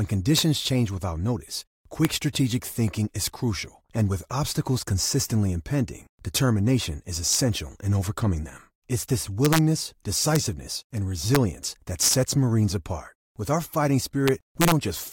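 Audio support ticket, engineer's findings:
Integer overflow, harsh sign-flip cracks on loud speech peaks at 0.38–0.41, 2.05, 7.33–7.35, 9.45–9.58, 10.36, 11.35, 12.03–12.14 and 14.28–14.72 s (after "our fighting"). Gain stage overshooting by about 0 to 2 dB wraps to the opposite sign instead of clamping. Probably missing saturation in the gain or mix sum.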